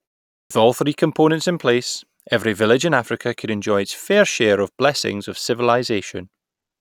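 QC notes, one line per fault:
0.34 to 0.51 s, clipped start after a pause: after about a third of a second of silence at the head of the clip, the speech begins abruptly, its onset missing. Roughly 165 ms of the opening sound is swallowed because the output device had dropped into a sleep state during the silence and was still waking or relocking when the sound arrived, so the speech enters without its first sounds and with no natural attack.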